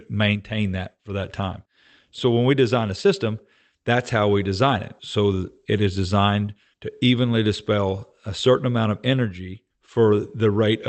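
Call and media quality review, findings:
Nothing stood out on listening to this speech recording over the call path; no findings to log.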